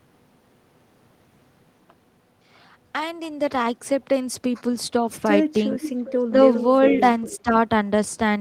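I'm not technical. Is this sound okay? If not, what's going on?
No. From 5.82 to 6.2 s, at 6.91 s and from 7.22 to 7.38 s, a faint repeat of the speech trails about 0.4 seconds behind, the last one quieter. This is an echo leak: someone is likely on a loudspeaker, and their phone sent part of what it played back down the line.

At 6.91 s the speech dips slightly for a moment, and from 7.43 to 7.53 s it drops noticeably. This is speech suppressed in double talk: with sound coming from both ends, the echo-removal system likely mistook the talker for echo and briefly turned them down.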